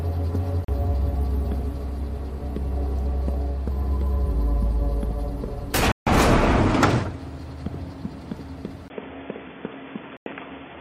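At 0.65 s there's a short hole, about 37 ms, where the audio just stops and then picks up further along, as if it kept playing underneath. That's a Bluetooth dropout, most likely packets not reaching the headphones in time, and the gap fits a couple of them going missing. A longer one hits at 5.92 s, about 150 ms, which sounds more like a whole run of packets lost in a row.

At 8.88 s things change character. After a brief silence of about 20 ms, everything above 3.5 kHz is gone, so the sound turns dull and boxy. A faint new noise floor also appears, well below the signal, while the level stays about the same. That's the input switched to a poorer device, likely a headset call profile or another narrowband microphone taking over, and it stays that way to the end. Inside that stretch, at 10.17 s, there's one more Bluetooth dropout, about 93 ms long.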